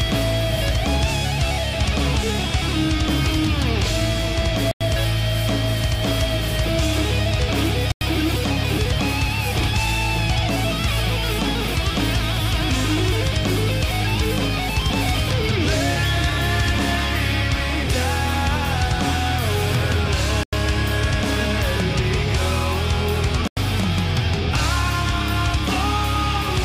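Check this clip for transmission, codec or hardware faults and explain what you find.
There are four dropouts, each a block of digital silence about 93 ms long, at 4.71, 7.92, 20.43 and 23.48 s. Each time the output buffer likely wasn't filled in time and got zeros instead. The sound snaps off and back with no fade, leaving a short hole. The identical length fits a 4096-sample buffer.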